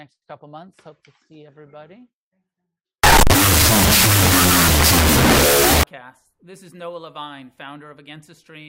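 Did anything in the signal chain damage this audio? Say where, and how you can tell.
Yes. A wrong sample width at the sample-format conversion stage: from 3.04 to 5.83 s, 16-bit integer data is read as unsigned 8-bit, so each byte becomes a sample. Low bytes turn into loud noise, the speech survives only in the high bytes, and it plays at half speed, an octave down.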